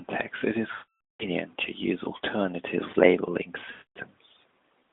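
After "it is", from 0.72 to 1.26 s, the speech smears into a drawn-out sound that fades to silence. Again at 3.72 to 3.98 s, after "to use alternative labeling", it stretches briefly and fades. Both are lost AMR speech frames: the decoder repeated its last good pitch and vocal tract settings at falling gain.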